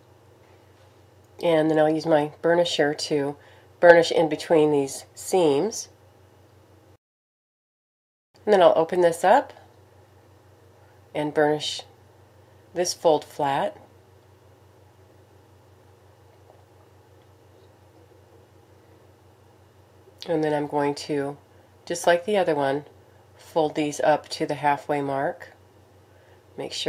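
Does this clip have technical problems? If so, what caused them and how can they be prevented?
No, there are no technical problems in this clip.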